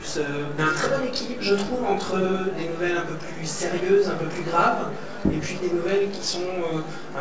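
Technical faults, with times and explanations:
Throughout: channel delay (comb filtering), a rough, slightly doubled sound from one channel arriving about 20 ms late and summed, cutting notches from roughly 30 Hz upward.
0.58 s: skip ahead, an abrupt jump with no gap where roughly 0.7 s of audio was dropped and the two sides joined directly.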